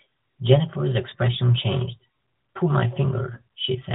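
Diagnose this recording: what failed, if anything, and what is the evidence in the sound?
Lost AMR speech frames at the radio/network stage: brief dips or warbles at 1.10 to 1.15 s and 3.34 to 3.42 s, each consistent with a single missing 20 ms frame. The decoder bridged each gap by reusing the previous pitch and vocal tract settings at falling gain. That is why the sound smears and softens rather than cutting to silence or clicking as a buffer underrun would. The surrounding narrowband sound stops at 4 kHz.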